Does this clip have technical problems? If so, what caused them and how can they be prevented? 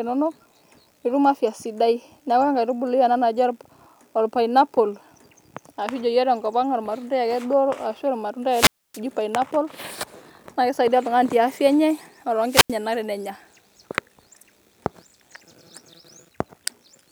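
Yes: two wireless microphone squelch dropouts, at 8.50–9.00 s and 12.44–12.77 s. The FM radio signal fades, hiss rises, and the receiver's squelch mutes the output for 0.28 s and 0.09 s. A spectrogram shows a broadband noise smear, then blank columns; the waveform goes flat. Keep the transmitter in line of sight and close to a diversity receiver.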